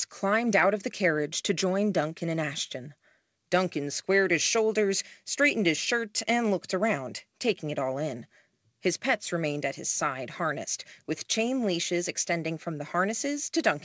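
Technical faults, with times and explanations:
The speech arrives over a call path with nothing above 8 kHz, consistent with a G.722 wideband codec at about 64 kbps, and no technical faults occur in the signal.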